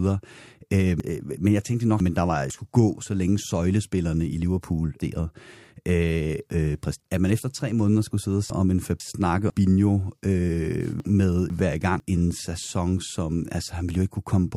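Chunks out of order garble the speech at 1.0–2.5 s (before "skulle gå så længe"), 5.0–7.0 s (before "at man efter tre"), 8.5–9.5 s (after "måneder skulle sidde og") and 11.0–12.0 s. A half-second block plays one to three blocks late, leaving hard joins. Unlike a dropout, nothing is missing, only reordered.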